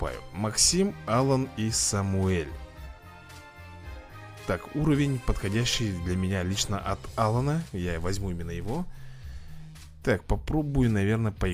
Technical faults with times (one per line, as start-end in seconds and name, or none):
none